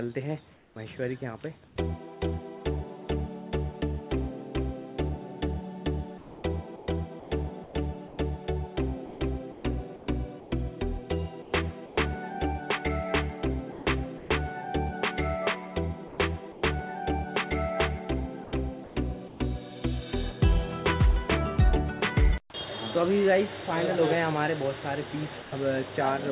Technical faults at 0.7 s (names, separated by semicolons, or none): comfort noise in place of the background; onset clipped by the voice detector